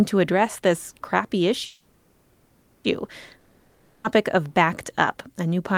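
From 1.65 to 2.86 s there is a call audio freeze: the last sound is stretched into a fading buzzy hiss for about 1.19 s, likely because packets stalled and the jitter buffer ran dry. Nothing is lost; everything afterwards arrives 1.19 s late. A spectrogram shows smeared, decaying horizontal bands with no new onsets.

From 3.38 to 4.06 s comes a long network dropout: a similar fading buzz fills about 0.66 s, and the audio resumes further on with that 0.66 s likely lost in transit. The waveform shows a shrinking envelope, then an abrupt jump to new material.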